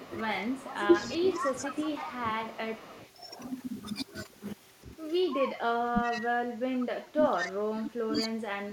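It's a speech clip, and from the start to 2.42 s and again from 5.19 to 8.72 s the voice dips and breaks up, with the worse drops in the second stretch: speech suppressed in double talk, likely an echo canceller ducking everything while both ends talk. There's also an echo leak, a copy of the voice trailing about 190 ms behind, from 0.67 to 3.09 s and in bursts at 5.38, 6.03, 6.8 and 8.19 s, sometimes nearly as loud as the voice itself, likely loudspeaker pickup the far end's canceller didn't fully remove.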